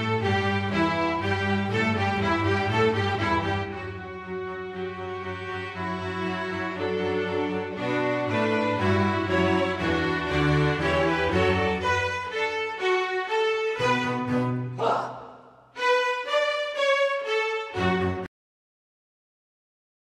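At 18.26 s a cut-off end stops the sound mid-event, final buffers never written; the waveform drops straight to flat digital silence, spectrogram blank after.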